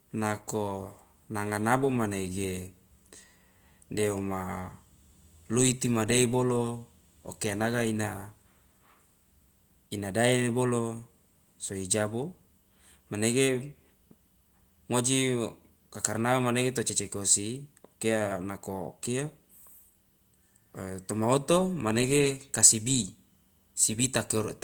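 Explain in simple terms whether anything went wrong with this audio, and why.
Nothing went wrong; no faults can be heard here.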